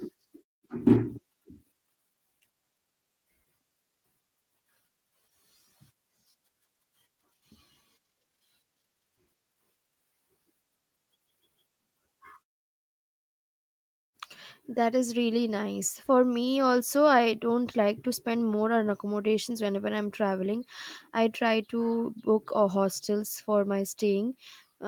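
At 1.31 s there is a skip ahead. A stretch of roughly 400 ms was discarded while later audio was already queued, so the receiver jumped straight past it with nothing inserted to cover the hole. The listener hears the speech lurch forward with no gap: part of what was being said simply vanishes, and the sounds on either side of the cut are butted together, giving an abrupt, clipped join.

From 1.41 to 2.86 s comes a jitter buffer speed-up. After the jump, the buffer still held more audio than its target, so the receiver repeatedly trimmed out short slices one or a few pitch periods long to drain the excess, removing something like 150 ms in total. The speech plays at about 111% speed with its pitch unchanged, so this stretch sounds rushed and compressed before the pace settles. During pauses, the background fades to silence as intended.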